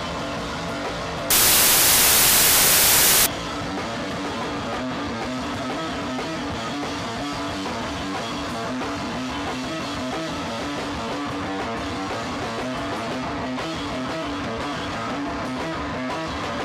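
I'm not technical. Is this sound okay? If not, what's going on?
No. From about 1.30 to 3.26 seconds the sound is swallowed by a loud hiss, like harsh static. This is samples built from the wrong bytes: the software reading the file pieced each sound value together incorrectly, mixing up which byte belongs where. The tiny, rapidly changing details ended up treated as the main part of the signal, and that comes out as noise.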